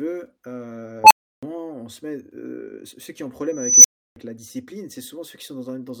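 At 1.04 s, just before "on se met heu", and at 3.50 s, after "ceux qui ont un", an unstable filter's output runs away. A tone near 1 kHz, then 7 kHz, swells over 66 ms and 340 ms and clips. The 320 ms silence when it resets sets it apart from acoustic feedback howl.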